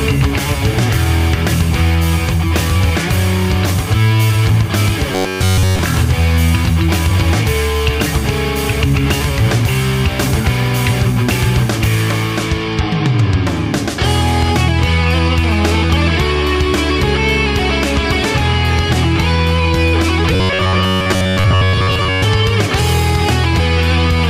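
From 5.12 to 5.79 s, the sound turns into a rigid metallic buzz. This is robotic sound from repeated short buffers. New audio likely arrived too seldom, so one short slice was replayed over and over while the real signal was skipped. Here nearly all of it is repeats. The buzz sits at 93.8 Hz, which fits a slice about 10.7 ms long. The same fault returns from 20.34 to 22.24 s, with most of that stretch repeated.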